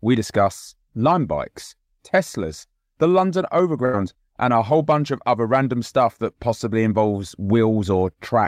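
At 3.85 s there's a burst of packet loss running to about 3.95 s. A short run of packets never made it in time, so the receiver papered over the hole by stretching the last bit of speech for roughly 77 ms and letting it fade, which you hear as a brief smeared, dying tail. When the speech comes back it has jumped ahead, with about 80 ms of the original simply gone.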